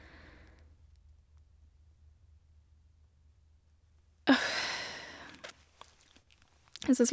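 Nothing in the speech recording points to a technical fault; the signal holds steady throughout, with no audible disturbance at any point.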